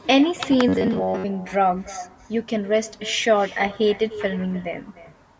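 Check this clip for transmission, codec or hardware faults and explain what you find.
Two faults are present: an echo running through the whole recording and a short burst of robotic distortion near the start.

Echo with no canceller, throughout: every phrase is trailed by a thinner copy, about 18 dB below the speech and arriving roughly 0.3 s later. The far end is playing the call on a loudspeaker, its microphone is picking that up, and nothing is subtracting it before it returns.

Robotic sound from repeated short buffers, 0.68 to 1.25 s: the speech becomes a rigid, metallic buzz at about 94 Hz that still loosely tracks the voice. This is likely caused by audio arriving too seldom, so the receiver loops a fragment of roughly 10.7 ms in place of most of the real signal, imposing that fixed pitch. The high-pass and 8 kHz band limit of the call's microphone processing are normal.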